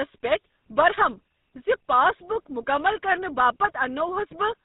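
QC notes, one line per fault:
Throughout, GSM full-rate codec: the speech has a plainly audible buzzy, gravelly roughness and nothing above 4 kHz, which fits the 13 kbps GSM full-rate coder. It models the vocal tract and drives it with coarse, regularly spaced pulses, so fine detail is lost.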